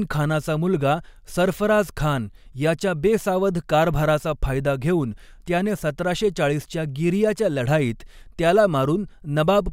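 No technical faults are audible.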